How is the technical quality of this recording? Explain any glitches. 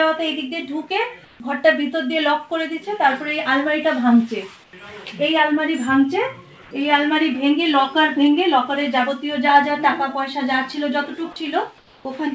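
The recording shows four short patches of comfort noise in place of the background. The audio also passed through a call path with nothing above 8 kHz, which fits a wideband codec such as G.722.

At 1.25–1.40 s, 4.64–4.73 s, 6.62–6.71 s and 11.78–12.05 s, the quiet background, about 26 to 32 dB below the loud parts, turns into steady, featureless hiss, about 2 to 4 dB quieter. This is likely discontinuous transmission: the sender paused during quiet moments and the receiver filled the gap with synthetic noise.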